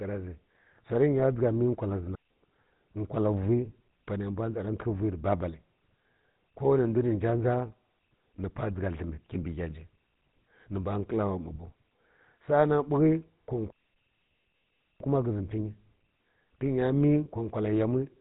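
This is speech run through the GSM full-rate codec, and the damage is plainly audible throughout. There's that buzzy, gravelly roughness from the pulse-driven vocal tract model, and nothing comes through above about 3.8 kHz, which fits the 13 kbps full-rate coder. On top of that there are two digital wireless dropouts, where the receiver loses too much data and mutes cleanly, with no noise burst either side. The first comes right after "məl wkwal zhi", from 2.15 to 2.31 s, a hole of about 155 ms. The second is much longer, 13.70 to 15.00 s, a full 1.3 s of near silence.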